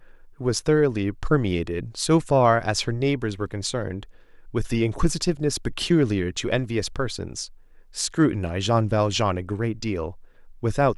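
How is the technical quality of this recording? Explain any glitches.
The recording has no technical glitches. Nothing in the speech points to a fault in how the audio was captured or delivered.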